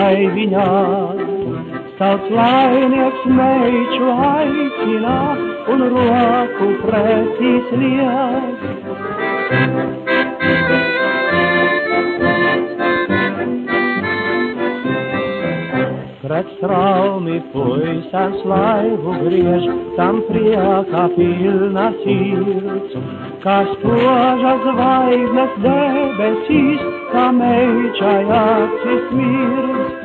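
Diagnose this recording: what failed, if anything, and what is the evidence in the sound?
Nothing failed: no stage from capture through playback leaves an audible mark anywhere in the recording.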